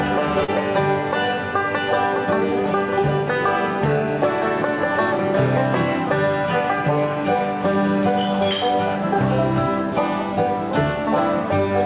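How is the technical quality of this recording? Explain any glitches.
There is one glitch, a short concealed packet loss near the very start, heard over a telephone-band call path where nothing reaches above 4 kHz, which fits narrowband coding such as G.711 A-law.

From 0.44 to 0.50 s, about 40 ms of audio failed to reach the decoder in time. The receiver covered the gap with synthesized sound extended from what came just before, then blended back into the real signal. The result is a brief smear or wobble where the detail briefly goes soft and repetitive. On a spectrogram that stretch shows smoothed, copied-looking harmonics or featureless noise instead of fine structure. In the waveform it shows as a short, overly regular patch with a slight join at each edge.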